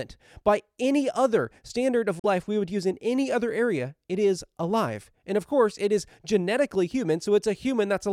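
Right after "any other standard of", from 2.19 to 2.25 s, the audio cuts out. That's likely a Bluetooth dropout, with late packets discarded, and it resumes at "we would use in".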